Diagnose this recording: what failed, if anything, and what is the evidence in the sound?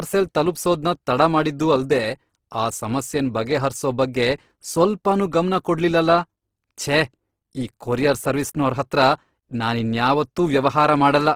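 The codec stage failed: the speech sounds rough and grainy throughout, with audibly noisy tones but less swirling and fewer spectral holes than MP3 would leave. Bandwidth stays full, up to 20.2 kHz. This is likely Opus compression in CELT mode, noise-filling starved bands at a rate that fits about 16 kbps.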